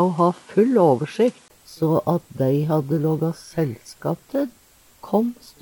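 From 0.0 to 1.5 s nothing reaches above 11.4 kHz, with its own noise around 30 dB down, then a 20 ms gap: likely input switched to a poorer device, not filtering.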